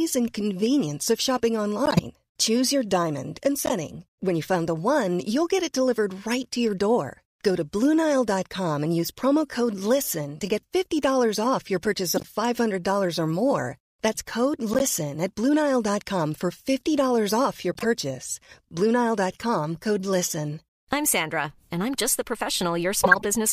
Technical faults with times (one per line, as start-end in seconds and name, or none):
1.86-1.99 corrupt frame decoded
3.66-3.72 corrupt frame decoded
12.15-12.25 corrupt frame decoded
14.69-14.82 corrupt frame decoded
17.63-17.85 corrupt frame decoded
23.04-23.25 corrupt frame decoded